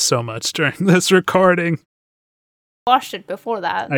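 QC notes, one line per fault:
2.31–2.87 s, clipped start after a pause: after a roughly half-second gap, the output path seems to have dozed off and needed time to wake, so the first 0.56 s of sound is lost and the speech jumps in abruptly, missing its onset.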